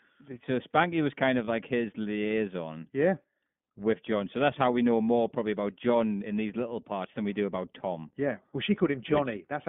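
Throughout the speech, the sound is clear but plainly rough and synthetic, confined to a narrow band of about 150 Hz to 3.5 kHz. This is the iLBC codec, which codes each 20 ms frame's excitation independently. The degree of coarseness fits its 15.2 kbps mode.

From 1.44 to 1.49 s, a brief held, slightly buzzy vowel replaces the speech for about 40 ms before it snaps back cleanly. These are lost iLBC frames, consistent with two 20 ms packets dropping out. The decoder filled the gap by repeating the last pitch cycle mixed with noise. Because each frame decodes on its own, recovery is almost immediate.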